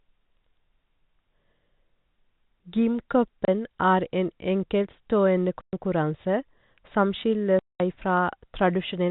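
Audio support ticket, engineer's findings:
Packet loss filled with silence: hard-edged dropouts at 3.45–3.48 s, 5.61–5.73 s, 7.59–7.80 s (30, 120, 210 ms), multiples fitting 30 ms packets. Receiver inserting silence, no concealment. Band-limited G.711 telephone coding audible throughout.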